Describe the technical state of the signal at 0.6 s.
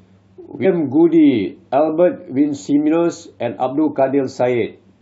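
At 0.64 s the compressed speech stream carries damaged data: a stretch of the encoded bytes is wrong, so the decoder misreads the frame there, loses its place in the stream and hunts for the next valid frame header before resuming. What reaches the ear is a brief glitch, under 20 ms long, where the decoder output is disrupted.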